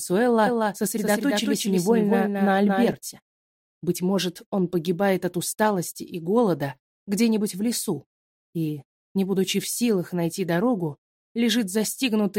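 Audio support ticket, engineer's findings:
Doubled audio track, 0.47–2.93 s. Full-band copy of the sound trails the original by roughly a fifth of a second, a few dB quieter, no decay or room colour. Starts and stops abruptly at those edges. Likely cause: second capture via a slower path mixed back in at a fixed offset.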